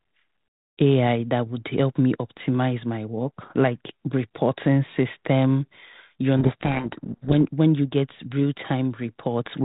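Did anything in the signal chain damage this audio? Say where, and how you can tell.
Yes. Codec payload misread at the codec stage, 6.37 to 7.35 s: the speech drowns in harsh distortion, not dropouts or clicks, because the G.726 code words are read with their bit order reversed.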